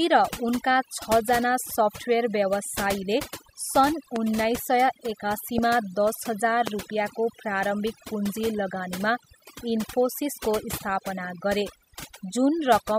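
Overdone noise removal runs through the whole speech clip: an over-aggressive reducer cuts bands it mistakes for noise, leaving near-silent gaps with twinkling specks.

Loud pops strike at 4.16–4.18 s, 5.58–5.60 s and 6.67–6.70 s, each a single sharp pop well above the speech, likely from a voltage spike such as a plug, switch or static discharge.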